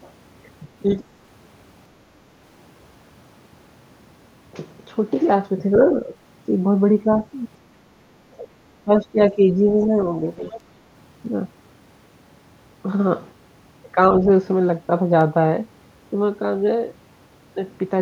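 Speech runs throughout, overlaid from 0.73 s to 17.84 s by word clock ticks: about 30 short, sharp ticks at a steady spacing of roughly 0.7 s, each a single-sample slip where an unlocked receiver's clock drifts past the sender's, a mismatch of roughly 30 ppm. That regular rhythm separates them from random clicks or codec dropouts. The other side's voice leaking through appears as brief fragments at 0.87–0.92 s, 9.80–9.85 s and 10.39–10.60 s, about 20 dB, about 35 dB and about 20 dB below the talker. The likely cause is far-end loudspeaker sound that the echo canceller failed to remove. Speech suppressed in double talk shows as dips in the talker's level: about 10 dB within 5.92–6.16 s, up to about 20 dB across roughly 700 ms within 8.30–9.91 s, and about 15 dB at 10.58–10.63 s. This is likely the echo canceller ducking both sides during overlap. Unlike packet-loss gaps, these dips coincide with the far-end fragments near 9.8 s and 10.6 s.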